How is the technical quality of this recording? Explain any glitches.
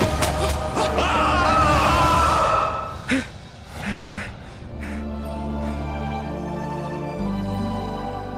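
There is one glitch, a call audio freeze, from 3.91 s to 4.20 s. The sound stalls and, instead of dropping to silence, the last moment is stretched into a fading buzz for about 260 ms before the audio resumes exactly where it left off. Nothing is lost; the rest of the clip simply runs about 260 ms late. The likely cause is delayed packets emptying the receiver's jitter buffer, with concealment filling the wait.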